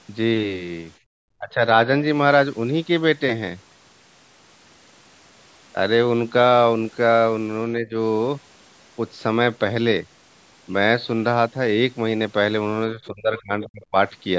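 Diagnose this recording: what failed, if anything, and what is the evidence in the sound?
The fault sits in call processing, at the echo canceller. From 0.99 to 1.1 s the room background drops by about 30 dB for roughly a tenth of a second, then returns. This is background gated by the echo canceller: it clamped the microphone hard while far-end audio played.

Speech dips three times in the same stage. At 1.38 to 1.64 s it falls by about 20 dB, and at 7.77 to 7.96 s by about 15 dB. From 12.92 to 13.95 s it drops about 30 dB for around a second. The likely cause is speech suppressed in double talk, where the canceller mistook the talker for echo and attenuated both.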